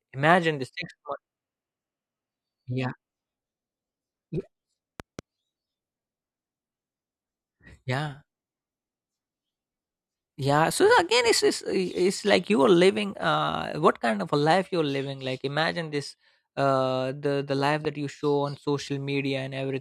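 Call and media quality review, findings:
Loud pop, 5.00–5.21 s: double thump, about 10 dB above speech. Loud pop, 17.85–17.87 s, between "uh the the life" and "you show on": single, about 5 dB. Speech continues beneath. Likely voltage step from plug, switch or static, shaped downstream.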